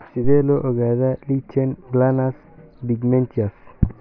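Speech, with no technical faults to be heard.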